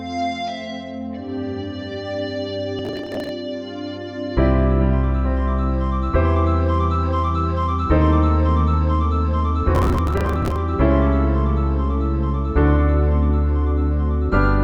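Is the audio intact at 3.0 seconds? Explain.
No, processor overload crackle runs from 2.79 to 3.29 s. The processor keeps missing its deadlines for short buffers of around 10 ms, several dozen in a row, and each late buffer is skipped, leaving hard-edged gaps heard as gritty crackle.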